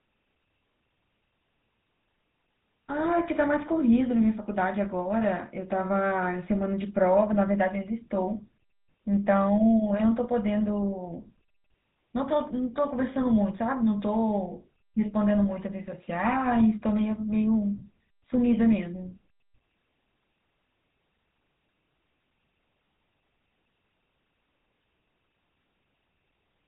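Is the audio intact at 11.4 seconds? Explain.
No, at 11.4 seconds the GSM full-rate codec damage is present, as it is across the whole clip. The coder models the vocal tract and excites it with sparse, regularly spaced pulses, which fits a 13 kbps GSM full-rate coder. The speech sounds plainly buzzy and gravelly, with nothing above 3.8 kHz.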